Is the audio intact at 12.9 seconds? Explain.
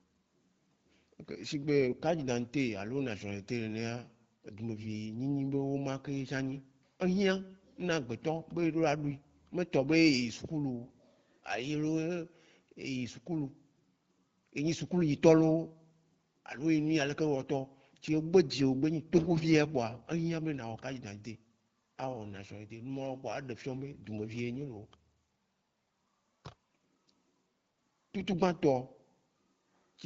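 Yes, the audio is intact at 12.9 seconds, with the speech passing cleanly through the AMR wideband (HD Voice) codec at 12.65 kbit/s and nothing breaking up at that moment.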